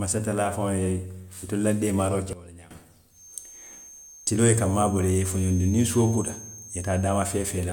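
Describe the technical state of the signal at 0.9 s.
At 0.9 s the speech signal is intact, with no audible fault at that point.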